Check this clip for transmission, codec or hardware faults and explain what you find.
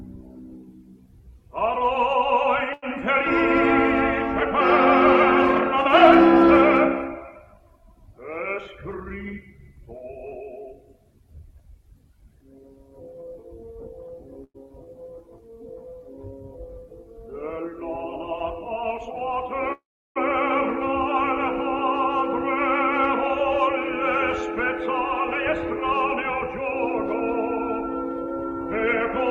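Four network-timing faults are audible, all from jitter-buffer behaviour.

At 2.73 to 2.84 s there is a short stall from a late packet. The buffer ran dry, so about 90 ms of the last sound is held with a slight buzz or dip before resuming, losing nothing.

From 8.58 to 9.12 s a jitter buffer speed-up plays the audio at 115% by trimming repeated pitch-period slices, roughly a tenth of a second in total. It sounds hurried at unchanged pitch.

Two call audio freezes occur at 14.44 to 14.56 s (104 ms, with 50 ms silent) and 19.72 to 20.18 s (432 ms, with 350 ms silent). The likely cause is packets held up in transit. A fading buzz or hiss trails into silence, then the audio continues where it stopped.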